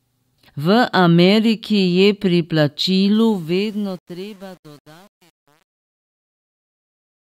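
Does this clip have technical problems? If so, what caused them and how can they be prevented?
Yes. The fade-out that begins around 3 s, from 3.14 s to the end at 7.25 s, carries truncation distortion on a fade, worst from 3.58 s onward. As the gain drops, the waveform is rounded to too few steps without dither, which fits an 8-bit stage, so the tail turns gritty. Unlike gate chatter, the grit deepens steadily with the falling level. Dither any gain or fade stage and keep it at 24 bits or more.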